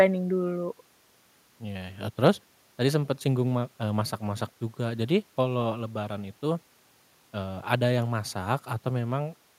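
No technical faults can be heard anywhere here.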